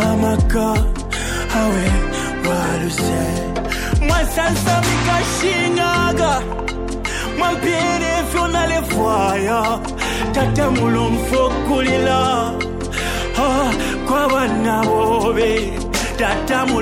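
At 12.47 s and 16.15 s there is a bit error spike. A flipped bit throws one sample, then three, far off. Each gives one sharp tick.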